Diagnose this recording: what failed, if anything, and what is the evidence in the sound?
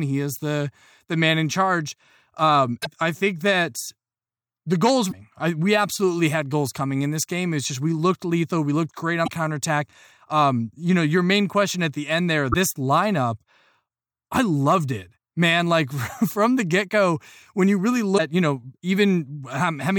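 Damaged data in a compressed stream, at the codec-decoding stage, causes the brief glitches near 2.81, 5.08, 9.24 (after "looked great"), 12.50 (after "at the end there") and 18.14 s (after "go when you really"). Each lasts about 60 ms as the decoder loses frame sync. On a spectrogram each shows as a broadband smear or blocky patch.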